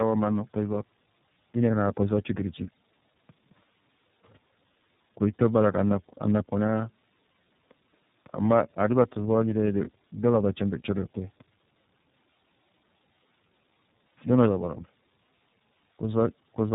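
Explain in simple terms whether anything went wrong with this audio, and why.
Yes, the speech passed through tandem speech coding throughout: it was compressed by one phone-network speech coder, unpacked, then squeezed again by a second. Each pass degrades the last one's output, so the speech sounds rough, muffled and warbly, with nothing above 3.8 kHz.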